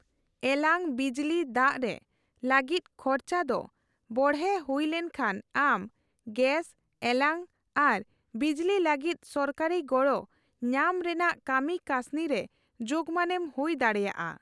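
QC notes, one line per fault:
No technical faults are present in the signal.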